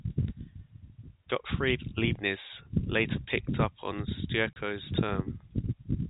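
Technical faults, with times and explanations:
4.53 to 4.56 s, packet loss filled with silence: the speech drops out for 30 ms, which fits a single lost packet, and the receiver inserted silence. Unlike concealed loss, nothing is smeared or repeated across the gap. The edges on both sides are abrupt within the narrowband telephone sound.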